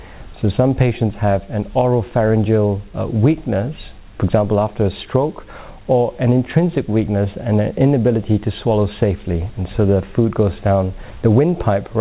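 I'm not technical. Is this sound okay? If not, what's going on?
Yes, it's fine, like an ordinary phone call.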